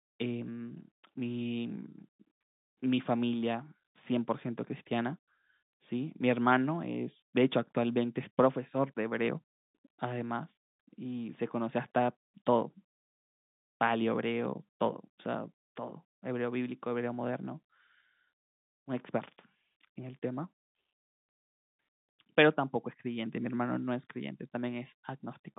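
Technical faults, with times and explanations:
Nothing stood out on listening to this telephone-band speech, which carries nothing above about 3.8 kHz.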